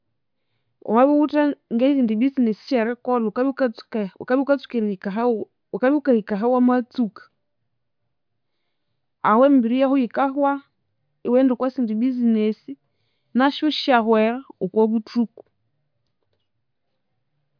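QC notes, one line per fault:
No fault to note on any line of this speech clip.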